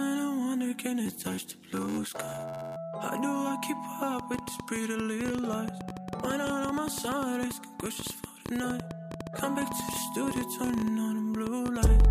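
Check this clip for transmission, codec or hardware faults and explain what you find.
Two faults are present: a padded block size mismatch early on, and a train of clicks from about a third of the way in to the end.

Block size mismatch (padded), 1.05 s to 2.76 s: one stage delivers shorter blocks than the next stage reads, so the remainder of each read block is filled with zeros. A short silence therefore lands in every block, producing a buzz at 86.1 Hz, which fits a 512-sample read buffer. Because the inserted gaps stretch the timeline, the audio plays at 0.861 times its normal speed while keeping roughly its original pitch.

Train of clicks, 4.19 s to the end: repeated pulses of much the same shape sit on top of the sound at about 10.5 per second, spaced irregularly rather than on a steady beat. They peak around 10 dB above the signal, so they stand out clearly as ticking and popping, including in quieter stretches. 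The likely cause is interference from nearby equipment or a faulty connection or power supply.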